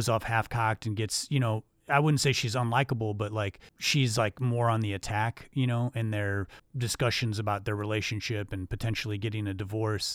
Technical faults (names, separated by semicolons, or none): none